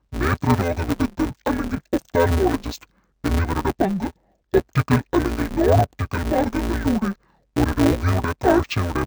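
Interleaved audio read as planar runs throughout the speech: each 5.8 ms block, which fits a 256-sample block, is split wrongly into channels, leaving a dull, robotic buzz near 172 Hz.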